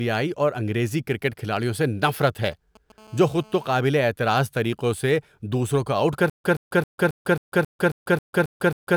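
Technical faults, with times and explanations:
2.05–2.92 s, GSM signalling bursts: just after "انگریزی کرکٹ کھلاڑیوں سے", a galloping cluster of brief buzzes cuts in under the speech, roughly 25 dB below it. The buzz segments repeat at about 217 Hz, the TDMA frame rate of a nearby 2G handset transmitting short signalling bursts rather than continuous traffic. The audio circuitry rectifies those RF pulses into the signal path, so the interference follows the burst pattern and is unrelated to the speech.
2.98–3.79 s, GSM phone buzz: the intermittent pattern gives way to a continuous hard, raspy buzz at about 217 Hz, around 27 dB below the speech. This fits the handset moving into a call state and transmitting a burst every frame. Each RF pulse is rectified into a sharp-edged audio pulse, so the buzz carries a dense stack of harmonics above 217 Hz. It sits on top of the speech with no relation to its content.
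6.30 s to end, stutter with silent gaps: after "سے دوسروں کو آؤٹ", a 125 ms fragment of audio repeats 10 times. Each repeat is followed by 145 ms of digital silence, giving an even 270 ms cycle that continues to the end of the clip. This pattern is likely caused by a stalled player or stream buffer that replays its last fragment on each retry and then runs empty. The speech that should have followed is lost.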